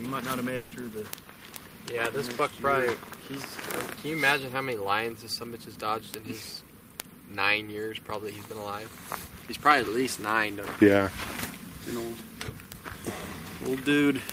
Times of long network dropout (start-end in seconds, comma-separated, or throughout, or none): 0.55-0.74